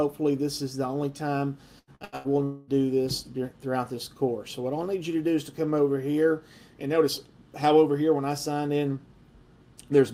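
The audio turns choppy from 1.79 to 2.27 s with repeated packet loss, giving a robotic sound. Four short holes appear, the longest about 83 ms. Each is patched by stretching the preceding sound, so roughly 60 percent of that span is synthetic. At 2.44 s a continued buzz or hiss replaces the signal for about 0.24 s, ending at 2.71 s. It never fades to silence. This points to a long network dropout as the likely cause, with the receiver extending the last sound across the missing stretch.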